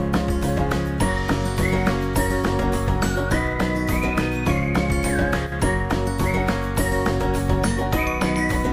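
At 5.47 s the sound abruptly drops by about 6 dB and stays down until 5.52 s, then snaps back. That brief dip is likely one channel drops out: one stereo side vanishes, so the mono sum loses half its shared content.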